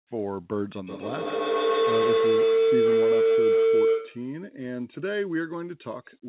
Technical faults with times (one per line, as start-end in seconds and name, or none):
0.87-4.42 feedback howl